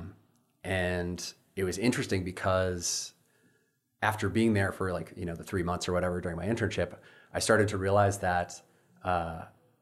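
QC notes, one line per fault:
No faults heard on this speech clip; passed for QC.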